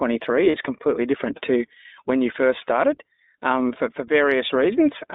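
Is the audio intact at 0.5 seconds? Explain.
No. From 0.50 to 0.56 s there are lost iLBC frames, about two 20 ms frames' worth. The decoder repeats the last pitch cycle mixed with noise, giving a held, buzzy vowel that shows as a flat, repetitive waveform stretch and smeared, unchanging harmonics on a spectrogram. This sits within the iLBC codec's narrow 250 Hz to 3.7 kHz band, which sounds slightly rough and synthetic and leaves the spectrogram empty above 3.7 kHz.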